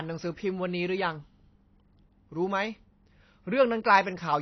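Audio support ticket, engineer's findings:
Dull, smeared speech throughout, nothing above 6 kHz. Likely AAC compression, which fits a low bitrate near 24 kbps. Coarse quantisation leaves holes and warble.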